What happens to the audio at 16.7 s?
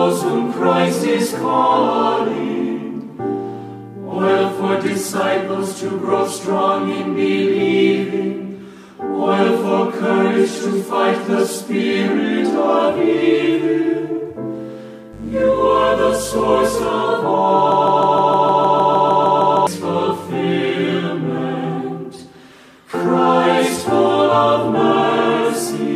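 At 16.7 s you're near the tail of a stretch of mains buzz that runs from about 15.13 to 16.89 s. Something like a dimmer or rectifier is letting sharp switching spikes into the path twice per 50 Hz cycle, so you get a stack of harmonics climbing up into the kilohertz range. It comes across as a steady, raspy buzz sitting maybe 20 dB under the programme, until it drops out just before 16.9 s.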